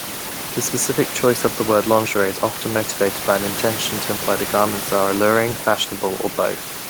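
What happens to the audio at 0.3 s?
At 0.3 s the speech comes through intact, with only the room's own background noise sitting about 12 dB beneath it.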